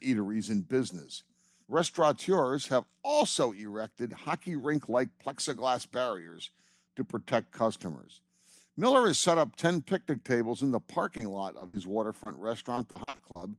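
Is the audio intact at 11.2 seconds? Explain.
No. Just after "picnic tables in the", 11.17 to 11.21 s has short concealed packet loss. About 20 ms never arrived, and the decoder extended the preceding sound, leaving a brief smear.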